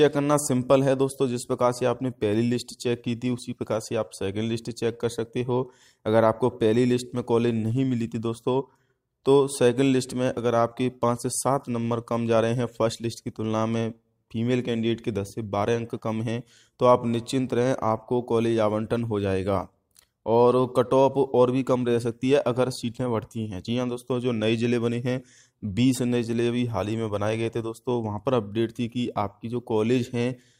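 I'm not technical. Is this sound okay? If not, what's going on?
Yes, the sound is okay. Nothing in it points to a technical problem at any point.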